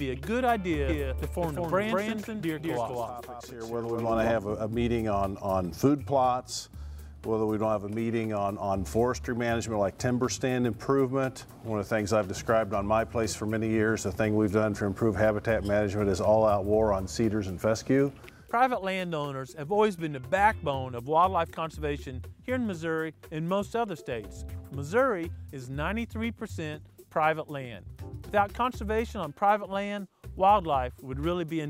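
From 0.89 s to 4.31 s the sound is heard twice, a second full-band copy trailing by about a fifth of a second at roughly equal loudness, with no decay or room colour, and cutting in and out abruptly. This doubled audio track likely comes from the same signal being captured again through a slower path.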